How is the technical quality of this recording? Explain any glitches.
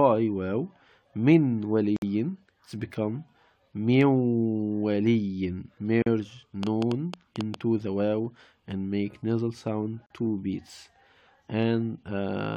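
The recording has two kinds of fault: short silent holes at regular intervals, and one burst of clicking.

The first fault is a gap at a join of encoded pieces. It occurs at 1.96 to 2.02 s (about 58 ms), 6.02 to 6.06 s (about 40 ms) and 10.06 to 10.10 s (about 40 ms), exactly 4 s apart. The audio was encoded in 4-second sections and stitched together untrimmed, so each join keeps the encoder's start-up silence and last-frame padding. The sound drops out with softened edges, then resumes exactly where it left off. The strict 4-second spacing and the seamless continuation distinguish this from a random network dropout, which skips material and falls at arbitrary moments.

The second fault is a train of clicks from 6.63 to 7.55 s, roughly seven clicks at about 7.7 per second, spaced unevenly. Each click peaks around 10 dB above the surrounding sound and has much the same shape as the others. 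The source is likely electrical interference or a faulty connection or power supply injecting pulses. Unlike codec artefacts or a single handling pop, these are a repeated ticking that sits on top of the audio, audible even where the underlying sound is quiet.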